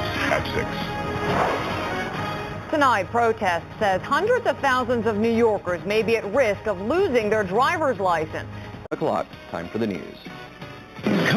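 The audio was raised to a higher sample rate by simple linear interpolation, and throughout the clip there is imaging from linear upsampling. The sound points to a conversion from 8 kHz up to 44.1 kHz. Straight-line interpolation filters too weakly, so the top of the original band is dulled, and mirrored copies of the spectrum leak above it, beginning in the 4 kHz to 8 kHz region roughly 25 dB down. These copies give sibilant and high content a faint metallic shimmer.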